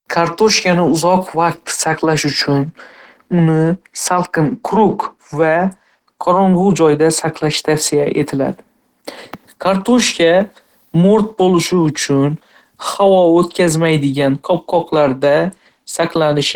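Throughout the speech, plainly audible Opus compression, likely hybrid-mode encoding at about 16 kbps, makes the sound hoarse and grainy rather than swirling like MP3.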